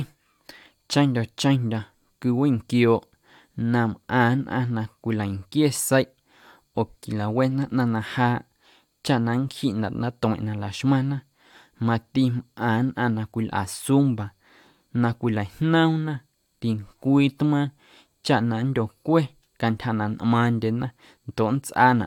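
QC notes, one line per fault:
No faults found. Nothing in this speech clip calls for a timed entry.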